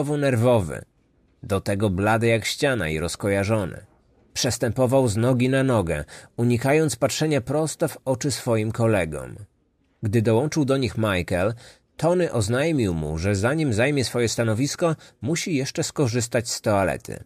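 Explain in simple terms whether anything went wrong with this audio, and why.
Nothing went wrong: the speech carries no audible faults anywhere in the recording.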